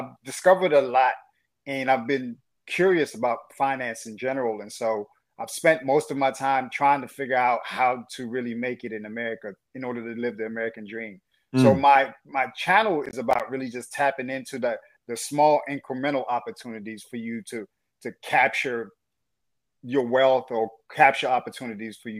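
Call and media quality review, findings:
Processor overload crackle, 13.06 to 13.40 s: a gritty burst of dropouts. The CPU is likely missing about 7 roughly 10 ms buffer deadlines, each leaving a hard-edged silent gap.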